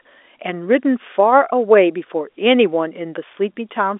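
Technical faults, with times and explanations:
Nothing stood out on listening to this speech, which carries the narrow band of an ordinary telephone line.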